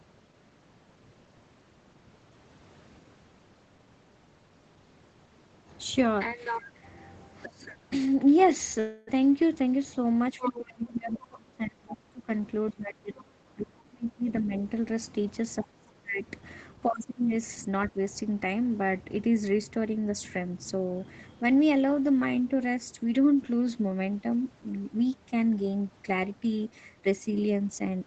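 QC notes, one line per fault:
8.79–9.10 s, long network dropout: about 0.28 s of audio never arrived, and the receiver filled nearly all of the gap by extending the last sound into a fading buzz rather than leaving silence, so the sound resumes with that stretch simply missing. This is likely packet loss concealed by the jitter buffer. It differs from a suppression dip because the fill is synthetic, not an attenuated original.
10.33–12.29 s, 12.72–14.55 s, 15.60–16.26 s, 16.87–17.32 s, speech suppressed in double talk: the talker's speech sinks by about 20 to 30 dB while the far side is active. The likely cause is an echo canceller unable to separate near speech from echo, so it ducked both. Unlike a dropout, the original sound remains underneath, only attenuated.
10.40–10.59 s, 11.33–11.37 s, 14.31–14.62 s, other side's voice leaking through: short scraps of a second voice sit under the talker, at about 10, 25 and 20 dB below the speech. 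Residual loudspeaker echo is the likely source. These add sound rather than removing it, which separates them from the suppression dips they overlap.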